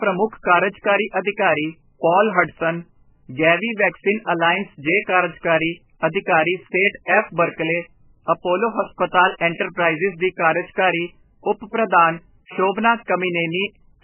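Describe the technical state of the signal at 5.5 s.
At 5.5 s the speech has the same heavy damage it carries through the whole clip, and it's likely MP3 compression. Nothing comes through above 3 kHz, so it's dull and boxed-in, and the sound has that watery, swirly quality you get when weak frequency lines drop in and out from frame to frame. S sounds turn chirpy and attacks smear. The damage is severe enough to suggest a very starved bitrate, something like 8 kbps.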